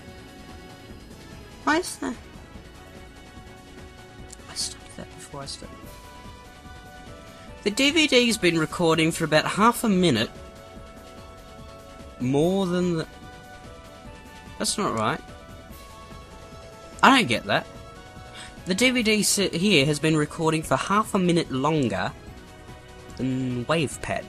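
At 10.18 s a corrupt frame is decoded, lasting until 10.27 s. Damaged bits in a short run of compressed frames were played anyway. Misread gains scatter energy to wrong frequencies. It sounds like a brief chirp, squeak, blip or burst of noise peaking around -15 dBFS.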